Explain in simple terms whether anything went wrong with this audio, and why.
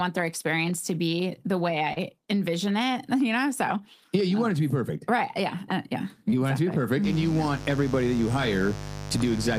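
Short concealed packet loss hits at 1.93 s, just before "envision it", and at 6.30 s. Tiny pieces went missing, and the receiver patched each gap with a brief smear.

From 7.03 s to the end there is mains buzz. Electrical interference from the 50 Hz power supply leaked in, adding a steady, raspy buzz under the speech.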